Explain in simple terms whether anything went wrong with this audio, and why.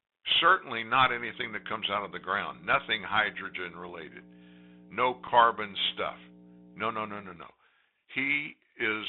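Several things went wrong here. The whole recording passed through a Bluetooth CVSD headset codec, the basic narrowband way headsets send a phone call. It squeezes the sound into a narrow band, roughly 200 Hz to 3.7 kHz, so everything sounds thin and boxed-in, like an old phone line. It also adds plainly audible damage: a grainy hiss under the speech and scratchy, rough s sounds. Ordinary low-quality phone filtering only dulls the sound, but this codec adds that grit and hiss as well.

From 1.02 s to 7.36 s there is mains hum, a steady low buzz at 60 Hz picked up from the electrical wiring, perhaps through a ground loop or a nearby transformer. It is loud, nearly as strong as the speech itself. What marks it as hum rather than background noise is that it is a steady, unchanging tone with a few low harmonics, not a hiss or rumble.

At 5.27 s there is unconcealed Bluetooth headset packet loss. 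About 7.5 ms of sound never arrived from the headset, which fits a couple of lost voice packets. Nothing filled the gap, so the speech briefly cuts to silence with sharp edges that can click. On this kind of link the sound can come back quieter for a moment. Unlike a recording glitch or a crackle on the microphone, this is a true missing slice of sound.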